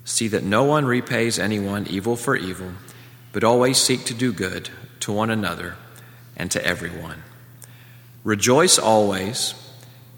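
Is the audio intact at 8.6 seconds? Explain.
Yes, at 8.6 seconds the audio plays through cleanly with no dropout, click, distortion or other fault audible at that point.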